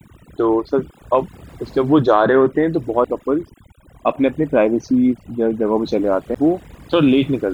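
From start to finish the speech carries overdone noise removal. The reducer cuts any band near its noise estimate, leaving near-silent gaps with twinkling specks. On a spectrogram the background is dark, scattered with isolated bright dots, and the weaker speech harmonics are ragged.

At 3.05 s a CD skip mutes the sound for a few milliseconds before playback resumes elsewhere on the disc. A second skip at 6.35 s mutes for about 10 ms. Each is heard as a tick and an abrupt jump, showing as a brief flat gap in the waveform and a thin vertical stripe on the spectrogram.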